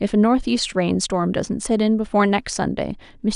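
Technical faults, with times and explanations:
No technical faults are present in this speech recording.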